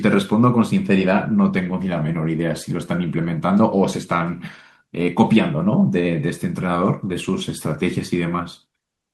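Listening through the speech recording, nothing stood out as a technical problem at any point.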